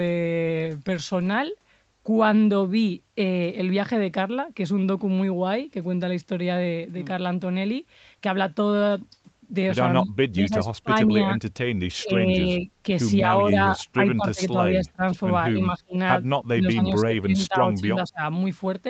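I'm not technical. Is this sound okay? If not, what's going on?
No. The voice repeatedly dips, goes dull or drops out in short pieces at 10.0 to 11.3 s, 12.0 to 12.7 s, 13.3 to 15.0 s, 15.5 to 16.0 s and 16.5 to 18.2 s. This is speech suppressed in double talk. When both sides of a call talk at once, the echo canceller likely mistakes this talker's voice for echo from the loudspeaker and turns it down. The longest and deepest cuts come near the end.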